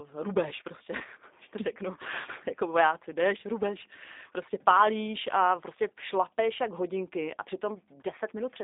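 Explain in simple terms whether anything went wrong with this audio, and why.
Yes, something went wrong: the whole recording has passed through the G.729 codec, a low-data phone-call format. It rebuilds speech from a rough model of the voice, so everything sounds rough and slightly synthetic, and nothing above about 3.8 kHz survives, which makes it muffled.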